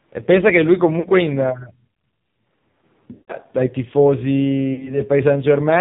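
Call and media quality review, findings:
AMR narrowband mobile codec, throughout: band-limited, nothing above 4 kHz. Speech heavily buzzy and synthetic, consistent with a low AMR-NB mode near 5.9 kbps. Vocal-tract model driven by too few pulses per subframe, so natural texture is lost.

Lost AMR speech frames, 1.00 to 1.09 s, 3.12 to 3.36 s, 4.74 to 4.99 s: decoder concealment after frames failed checksum. Brief dips and warble at 1.00 and 4.74, each about 40 ms lost, fitting two frames. At 3.12, 160 ms lost, fitting eight frames. Sound drawn out, fading toward silence, returning rough.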